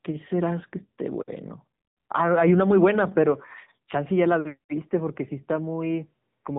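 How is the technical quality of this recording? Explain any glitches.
Technical quality is poor, with one fault throughout: AMR narrowband mobile codec damage. The vocal-tract model with few pulses per frame renders speech buzzy and synthetic, with nothing above 3.8 kHz, fitting a low rate near 8 kbps. That synthetic buzz sets it apart from a plain band-limited phone filter.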